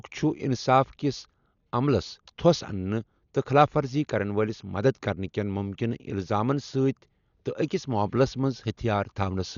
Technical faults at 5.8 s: Dolby Digital compression

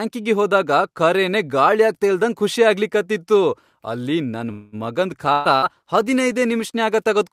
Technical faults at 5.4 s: call bitrate drop; burst of packet loss

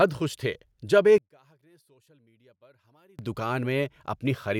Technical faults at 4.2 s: none

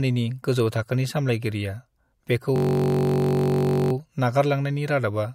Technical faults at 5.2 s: none

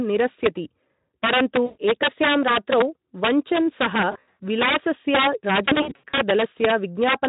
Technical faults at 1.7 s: integer overflow; VoIP packet loss concealed by the speech codec

